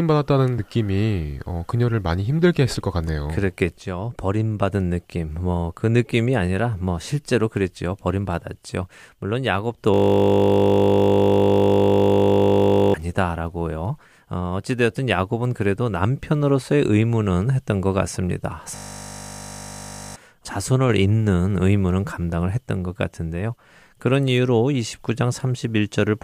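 At 9.94 s the speech gives way to a system hang loop until 12.94 s, and again from 18.76 to 20.16 s. The machine stalled while the hardware replayed one 20 ms buffer. It sounds like a steady 50 Hz buzz, and about three seconds and one and a half seconds of speech are lost.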